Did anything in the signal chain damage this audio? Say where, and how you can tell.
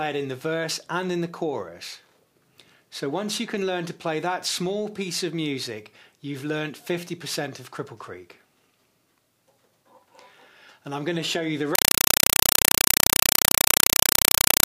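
Yes. At playback, a compressed stream was played as audio from 11.75 s to the end: undecoded AC-3 frames become 4 ms noise bursts at 31.25 Hz, replacing the sound.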